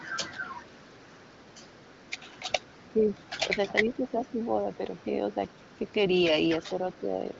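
From 0.0 to 2.87 s there is an echo leak: a faint copy of the speech trails it by 449 ms at about 30 dB down. The far end's echo canceller likely let loudspeaker pickup slip through. On a spectrogram it appears as weak, time-shifted ghosts of the harmonic striations.

From 2.88 to 3.16 s and 3.49 to 4.34 s, the speech is suppressed in double talk. The level dips by roughly 10 dB, with the dip lasting a few hundred milliseconds in total. This is likely an echo canceller ducking the talker while both sides overlap. The waveform envelope shows sudden notches, and the spectrogram shows fading upper bands.

The echo leak returns from 3.88 to 5.92 s at about 35 dB down, with the same 449 ms lag. It appears again only as short scraps at 6.91 to 6.98 s and 7.31 to 7.36 s, visible as faint delayed smears.

A milder double-talk dip of about 5 dB runs from 6.62 to 7.22 s. It shows as a shallow sag in the envelope. 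Throughout, the wideband codec path cuts everything above about 7.7 kHz, which gives the spectrogram a clean ceiling.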